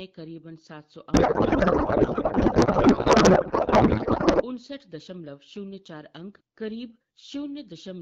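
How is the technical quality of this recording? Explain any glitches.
A single fault stands out. From 1.13 to 4.44 s the speech gives way to garbled, warbling noise that barely follows it. This is a codec payload misread: octet-aligned AMR frames were decoded as bandwidth-efficient, so every field was read from the wrong bits. Around it, the AMR wideband (HD Voice) codec shows only light coding artefacts, which fits a rate of 12.65 kbit/s.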